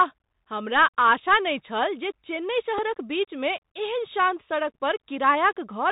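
Throughout, the speech carries a Bluetooth CVSD headset codec sound. One-bit delta coding at a rate that fits a 64 kbit/s link cuts everything above 4 kHz, leaving scratchy sibilants and granular hiss. At 2.78 s, a Bluetooth headset packet repeated: a lost slot of about 3.8 ms, consistent with one packet, was filled by re-decoding the previous one, producing a brief tick.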